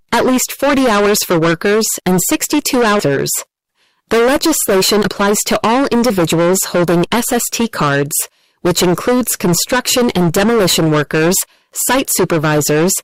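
The audio is hard clipped from start to finish. It is driven about 17 dB past what the stage can pass, so roughly a third of the samples hit the ceiling and are cut flat. Every loud moment carries a harsh fuzz rather than occasional crackle. On a waveform display the signal is a dense block with squared-off tops. A spectrogram shows extra harmonic energy smeared up into the high kHz range wherever the level is high. At about 3.0 s there is a skip ahead. Playback jumps forward with no silence filling the join, and roughly a second of material is missing. This fits a jitter buffer dropping a backlog of audio that was already queued, which shortens the delay by about the same second. On the waveform it shows as an abrupt splice where the envelope on one side doesn't follow from the other. The spectrogram shows a sharp vertical discontinuity rather than a gap. From 4.69 to 7.62 s a jitter buffer speed-up runs the audio at 113% speed with the pitch unchanged. 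Short pitch-period pieces are trimmed out repeatedly to drain excess buffered delay, about 0.4 s in total, so this stretch sounds hurried. A spectrogram keeps the harmonic spacing intact while events along the time axis come closer together than before and after.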